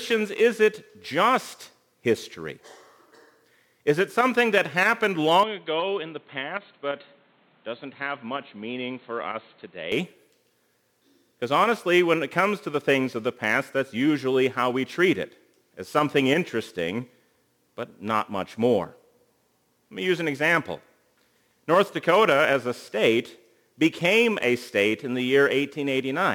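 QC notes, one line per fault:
5.43–9.92 s, input switched to a poorer device: the sound abruptly turns dull and boxy, drops roughly 10 dB in level, and picks up a new background noise sitting around 30 dB under the signal. It then clears back up at 9.92 s. Nothing reaches above 4.3 kHz during this stretch, and there is no gap at either switch, so the likely cause is the input jumping mid-recording to a narrower-band microphone or headset call profile with its own noise floor.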